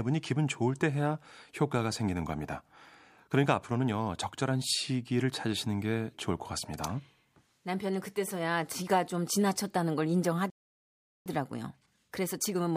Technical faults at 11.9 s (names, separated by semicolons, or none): time-compressed catch-up